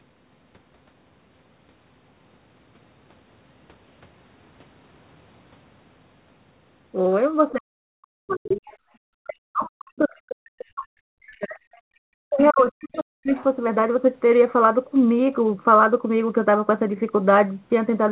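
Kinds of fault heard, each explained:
Speech suppressed in double talk: the speech dips by up to about 40 dB in three stretches, likely an echo canceller ducking both talkers during overlap.
Other side's voice leaking through: brief scraps of a second voice sit about 20 to 35 dB below the speech, likely loudspeaker echo the canceller left behind.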